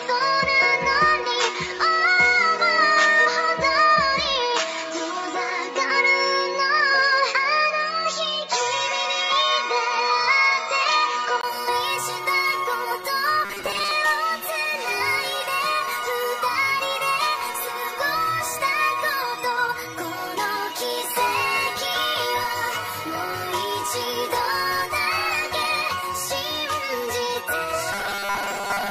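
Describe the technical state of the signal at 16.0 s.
Nothing at 16.0 s points to a fault; the signal there is intact, with no dropout, distortion or other defect to be heard.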